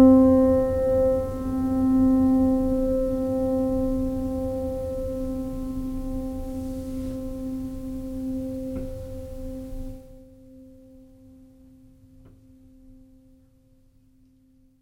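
Nothing stood out on listening to this music.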